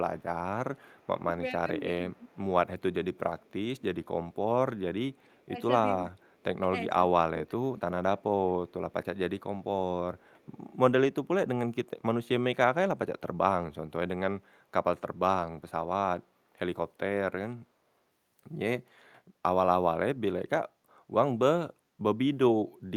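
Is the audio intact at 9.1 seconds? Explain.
No. From 8.69 to 9.43 s there is an echo leak: a very faint delayed copy of the speech, roughly 40 dB below the direct signal, trailing it by 396 ms. The likely cause is a far end playing the call over a loudspeaker, with its echo canceller failing to fully remove what its microphone picked up, so the residue was sent back. At 9.1 s that faint, lagging repeat is audible beneath the speech.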